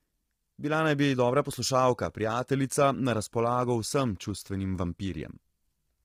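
Low-delay AAC compression is heard throughout: too few bits fill the gaps between the voice's harmonics with noise, giving heavy grainy roughness, likely AAC-ELD at about 24 kbps.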